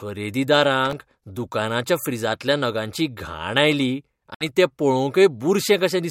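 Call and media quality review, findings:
Processor overload crackle, 0.86–1.17 s, just before "दुकानाच्या फ्रिजांतल्या नगांची घाण": gritty tearing over the speech. Audio processing is missing deadlines on very short buffers, under a millisecond each. About ten misses in a row, each filled with stale audio, with hard edges.

Bluetooth dropout, 4.34–4.45 s, after "फ्रिजांतल्या नगांची घाण आयली": a silent hole with about 61 ms of audio missing. Speech resumes further on, as if it had kept playing. Likely the wireless link dropping packets. The gap fits roughly four lost frames.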